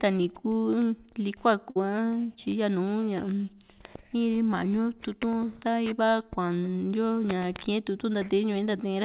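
A speech clip, carried over a call path that tops out at 4 kHz, which fits a narrowband G.711 mu-law link. At 1.70 s there's a burst of packet loss running to about 1.77 s: a run of packets never made it in time, so the receiver stretched the last sound for roughly 54 ms, fading it down into a held buzz or hiss, and then picked up again with about 60 ms of the speech skipped entirely.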